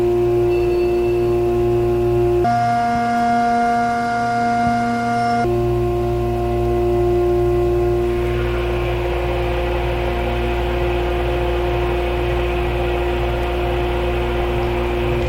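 From 2.44 s to 5.44 s the audio has been read two samples at a time, so it plays at double speed. The reader treated each pair of samples as a single frame, as if the stream held two interleaved channels or samples twice as wide. Playback runs at 2x and jumps a full octave, 12 semitones, higher.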